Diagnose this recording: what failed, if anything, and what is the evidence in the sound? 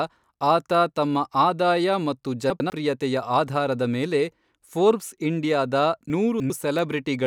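Chunks out of order in the buffer stage: 100 ms pieces of speech play late, by one at 2.5–2.7 s and three at 6.1–6.5 s, causing jumbled moments.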